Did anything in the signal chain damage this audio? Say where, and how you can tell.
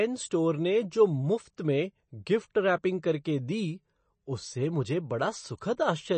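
Yes. The codec stage left its mark across the whole speech clip: a hard ceiling at 8.3 kHz, with a watery, swirly texture and metallic chirps on s sounds. This is likely MP3 compression at a starved bitrate, which fits a low 32 kbps. Short of bits, the encoder chops the treble and drops weak frequency lines that flicker between frames. On a spectrogram that appears as a flat cut at 8.3 kHz and speckled, patchy holes below it.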